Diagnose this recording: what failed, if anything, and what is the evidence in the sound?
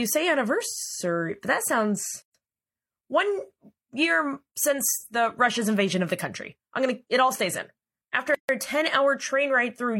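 The fault sits at the codec stage: a gap at a join of encoded pieces. Right after "say anniversary but that", the speech stops for 126 ms (2.22 to 2.35 s), and again for 144 ms at 8.35 to 8.49 s, six seconds later. Separately encoded segments were joined untrimmed, so each one's encoder start-up delay and padded final frame remain as silence. Unlike packet loss, nothing is missing: speech resumes exactly where it stopped, with smeared edges at a regular 6 s spacing.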